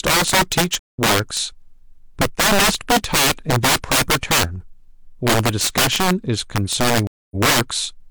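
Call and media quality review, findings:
Integer overflow, throughout the speech. Violent cracks on loud peaks, harsher than clipping. Gain stage overdriven by about 15 dB, roughly 7% of samples past full scale. No limiting; each over-limit sample wraps to the opposite sign.

Stream reconnect, 0.79 to 0.99 s. Dropout, 148 ms silence. Player lost the connection, rejoined and restarted its decoder mid-stream. Resumes about 150 ms later, so that stretch of speech is skipped.

Stream reconnect, 7.07 to 7.36 s. Dropout, 238 ms silence. Same path. Resumes 46 ms earlier; server resent a burst, so a short stretch repeats.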